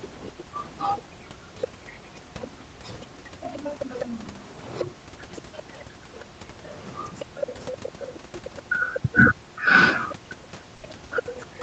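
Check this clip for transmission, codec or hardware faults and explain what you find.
There are three problems here, all of them echo-handling and transmission trouble rather than hardware faults.

From 0.26 to 9.0 s, and again from 10.09 to 11.57 s, you can hear the other side's voice leaking through underneath the talker, sitting roughly 15 dB below the main speech. It sounds like a faint second voice. The likely cause is the talker's device playing the far end over its loudspeaker, with the echo canceller failing to scrub all of that out of the mic signal before sending it on.

From 0.33 s right through to the end, the talker's own speech gets suppressed during double talk. The main speech keeps dipping, dulling at the top and dropping out in chunks, with the deepest drops somewhere around 40 dB. With both sides talking at once, the echo canceller likely couldn't tell its own talker apart from the echo, so it turned everything down together.

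There's also a short patch of comfort noise in place of the background, from 10.75 to 10.83 s, lasting about 80 ms. For that moment the real room tone, which sits around 25 dB under the speech, gets swapped for a flat, featureless hiss about 3 dB quieter. That fits Opus discontinuous transmission: the sender likely went quiet when its voice detector heard no speech, and the receiver filled the gap with synthetic noise.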